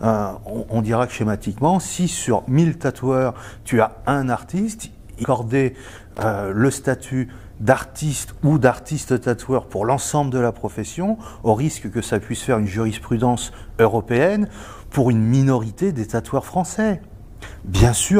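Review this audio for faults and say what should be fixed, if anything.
A short, irregular burst of scratchy crackle cuts through the sound from 6.15 to 6.23 s, lasting under a tenth of a second. This is loose connector crackle. A worn or dirty contact somewhere in the cable path briefly lost and regained connection, chopping the signal on and off in rapid, uneven bursts. Any DC present on the line would turn each break into a small pop. Fixing it means cleaning or replacing the faulty plug, socket or cable. To prevent it, inspect and clean connectors regularly, secure cables with strain relief so they cannot move during recording, and retire any lead that crackles when flexed.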